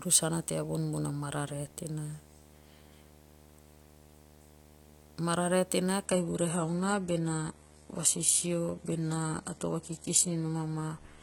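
Right from the start there's a video or display buzz riding under the speech: a steady 75 Hz drone with a grainy hash sitting above it, roughly 25 dB down from the voice. That's a screen or video cable leaking its field-rate energy into the audio path, and it never lets up.

Then at 6.05 s the quality drops suddenly, with no gap, and stays that way to the end. That's the signature of an adaptive stream at a lower bitrate: the player switched to a thinner version when the connection slowed. Everything above about 11.8 kHz vanishes and codec artefacts rise. It sounds like the stream went from a decent AAC encode down to a low-rate HE-AAC one, something in the region of 16 kbit/s.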